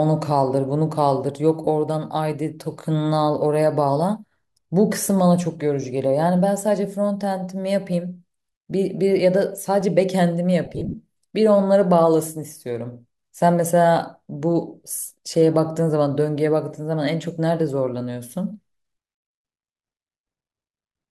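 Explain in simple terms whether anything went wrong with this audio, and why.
A couple of things went wrong in this speech clip.

The first is lost LE Audio frames. At about 1.65 to 1.67 s, roughly 22.5 ms of sound went missing, which fits three of the short 7.5 ms chunks Bluetooth LE Audio sends at a time. When chunks don't arrive, the LC3 decoder patches the hole by replaying the last bit of sound it had, with its detail scrambled. So instead of a clean gap you hear a brief hissy smear. It happens again, worse, between 10.65 and 10.94 s. About 157 ms went missing in patches spread across that stretch, the longest about 30 ms, so the sound there turns rough and smeary in several spots.

The second is an underrun with held sample, at 9.81 s. For a fraction of a millisecond the output buffer ran dry, and the converter simply held its last value until fresh data turned up. Nothing was actually lost, and playback carried on exactly where it stopped. 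That's why it makes little sound: at most a tiny, soft tick rather than a proper click.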